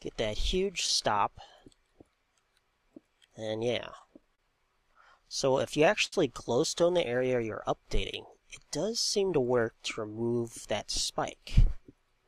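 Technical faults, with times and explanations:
4.35–4.39 s, short stall from a late packet. A packet missed its playout time and the jitter buffer ran dry. The receiver bridged the wait by extending the last stretch of sound for about 28 ms. It then resumed exactly where it had stopped, so no audio is lost. The sound is simply held a little too long at this point, and playback from here on runs 28 ms later.
4.94–6.13 s, repeated stalls (stutter). Packets kept arriving late, so the jitter buffer emptied again and again. There are seven separate holds across this span, totalling 123 ms of filled sound. That is about a tenth of the span. The longest wait is 68 ms. Each time, the receiver carried the last sound forward until data arrived. Nothing is missing, but the audio drags and catches repeatedly.
9.29–10.23 s, jitter buffer speed-up. The buffer was holding more audio than its target. To shrink that backlog, the receiver cut out many short pieces, each one or a few pitch periods long. 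About 70 ms was removed in all. The audio here plays at 108% speed with the pitch unchanged. At that rate it sounds noticeably hurried, and the timing runs ahead of its natural pace.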